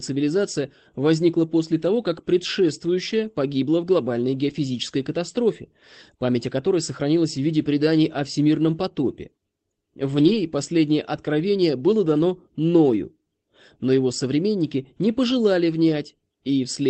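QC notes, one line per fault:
4.49 s and 7.29–7.31 s, lost packet rebuilt from error correction: two brief rough, grainy patches, just after "предшествующая погибла в глобальной" and just before "в виде преданий о". Each lasts about 20 ms, which fits one lost packet replaced by the lower-bitrate backup copy carried in the next packet. There is no dropout, so the waveform stays continuous. On a spectrogram, each shows as a thin column of smeared harmonics with extra noise between them.
10.15–10.33 s, lost packet rebuilt from error correction: a longer rough, noisy stretch lasting about 0.18 s, ending just before "последнее откровение было дано". Its length points to several separate lost packets, each replaced by its lower-quality backup copy. On a spectrogram, the harmonic lines blur across the whole band below the Opus call path's 8 kHz ceiling. The waveform shows no gap.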